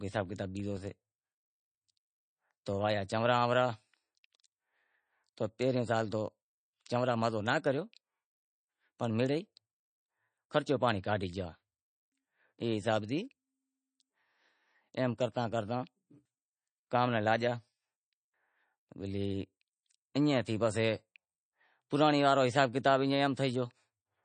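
From 0.0 to 2.77 s a buzz of regularly spaced ticks at 23.4 Hz rides under the speech: a filter restarted on every block, starting each from silence. The rate fits a 2048-sample block. Unlike codec damage, it follows the speech level and stops abruptly.

Throughout the clip there is plainly audible watery, swirling texture with chirpy s sounds and smeared attacks, and nothing above 9.1 kHz. This is likely MP3 compression at a low bitrate, around 32 kbps. It differs from the ticking because it has no fixed repetition rate.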